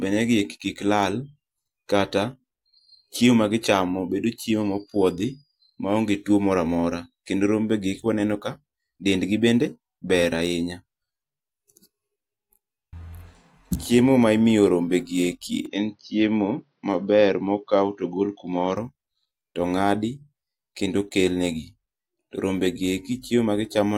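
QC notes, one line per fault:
15.66 to 18.76 s, input switched to a poorer device: the speech turns dull and boxy with no gap at the switch and no clear jump in level, then clears again. Nothing reaches above 6.2 kHz, and a faint new noise floor sits far below the speech, likely from a narrower-band microphone or headset profile.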